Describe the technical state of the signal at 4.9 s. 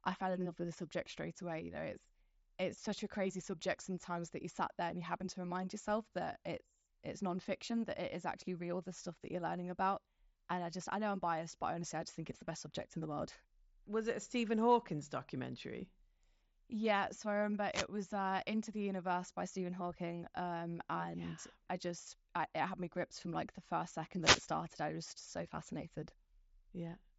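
At 4.9 s the speech is intact, with no dropout, click or distortion, only the band-limited, lightly grainy character of the mSBC headset codec carrying it.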